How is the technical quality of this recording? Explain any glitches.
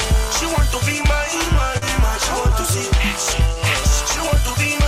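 There is one glitch: a short concealed packet loss at about 1.77 to 1.83 s. Roughly 40 ms of audio arrived too late to decode, so the receiver synthesised a stand-in by extending the preceding sound and then crossfaded back, leaving a brief smeared, wobbly patch.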